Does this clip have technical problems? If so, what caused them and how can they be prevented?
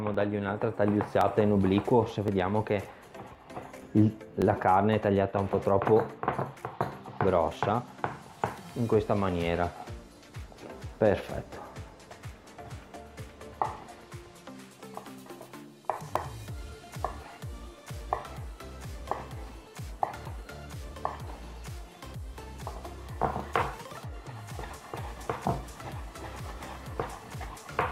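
Yes. A click recurs every 1.07 s from 0.14 s to 27.90 s, around thirty in all. These are likely clock drift buffer slips: two unsynchronised clocks differing by roughly 0.1% let the buffer drift until a block of a few dozen samples is dropped or repeated. Lock all devices to one shared clock, or use adaptive resampling between them.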